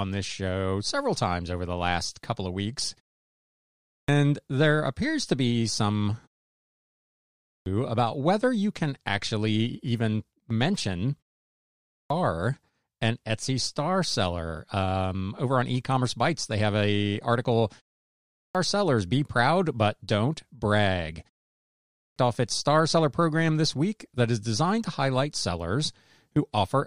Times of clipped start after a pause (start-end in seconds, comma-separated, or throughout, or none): 3.66-4.08, 7.19-7.66, 11.66-12.10, 18.13-18.55, 21.72-22.16